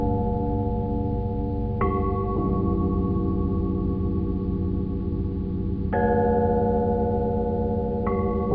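No technical faults are audible anywhere in this audio.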